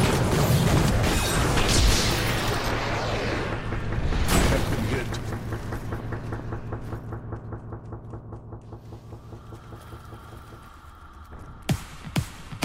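No technical faults can be heard anywhere in the clip. Nothing in the sound breaks, drops out or shifts at any point.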